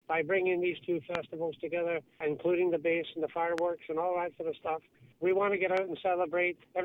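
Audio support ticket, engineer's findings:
Loud pop, three single pulses: 1.15–1.17 s (about 20 dB above the signal), 3.58–3.60 s and 5.77–5.79 s (each about 15 dB above). Each is a brief thump over continuing sound. Likely a voltage spike from a connector, switch or driver glitch entering the chain.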